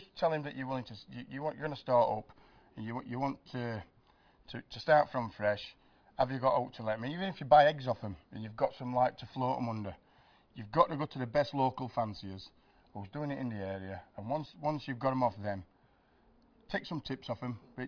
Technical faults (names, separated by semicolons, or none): none